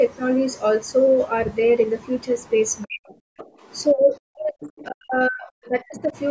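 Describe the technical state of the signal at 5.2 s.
At 5.2 s you're inside a stretch of speech suppressed in double talk, running 4.87 to 6.16 s. The speech dips hard, down about 40 dB at worst, and breaks up for roughly a second in total, likely because the echo canceller mistook it for echo while the far end talked.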